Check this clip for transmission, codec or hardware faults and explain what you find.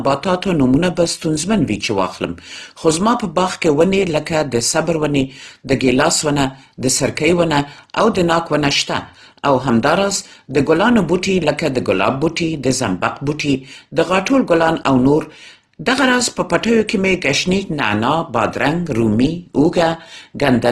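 One codec fault runs through the whole speech clip: Opus compression, likely in its CELT music mode. Nothing sounds above about 12.1 kHz, and the damage is plainly audible, pointing to a low rate near 16 kbps. Starved bands are refilled with folded or noise energy, so the sound turns rough and grainy rather than swirling with the watery holes of MP3.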